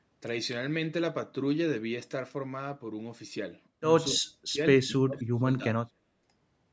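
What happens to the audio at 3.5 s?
At 3.5 s the speech runs on intact with no dropout, click or distortion, and carries the thinned low end and roughly 8 kHz upper limit of ordinary call microphone processing.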